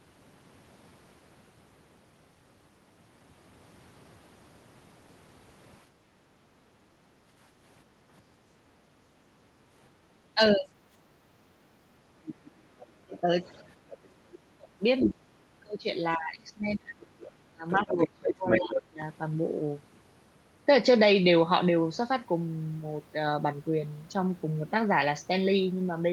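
Background gated by the echo canceller, 5.89 to 8.04 s: while the far end played, the canceller clamped the microphone, so the room tone dips by up to about 8 dB for roughly a second and a half before returning.

Speech suppressed in double talk, 10.34 to 10.7 s: the talker briefly sinks by roughly 15 dB for about a fifth of a second, likely because the canceller mistook overlapping speech for echo.

Background gated by the echo canceller, 10.98 to 12.77 s: the room sound ducks again, up to about 7 dB, for around a second in total.

Other side's voice leaking through, 12.27 to 13.97 s: a faint second voice sits roughly 20 dB under the talker, likely loudspeaker echo the canceller failed to fully remove.

Speech suppressed in double talk, 13.06 to 13.27 s: a short dip of roughly 20 dB, about 150 ms long, likely the canceller again attenuating the talker during overlap.

Speech suppressed in double talk, 14.22 to 19.01 s: the talker breaks up repeatedly, dropping by as much as about 30 dB for roughly three seconds in all, likely from sustained double talk confusing the canceller.

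Other side's voice leaking through, 15.0 s: a brief scrap of the far voice pokes through at about the talker's own level, likely an uncancelled echo burst.

Other side's voice leaking through, 17.23 to 18.81 s: the far voice returns for over a second and a half, only about 5 dB below the talker, likely residual loudspeaker echo.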